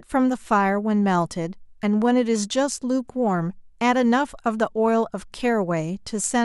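Nothing in this speech recording stands out as a technical fault, so there's no moment in it that calls for attention.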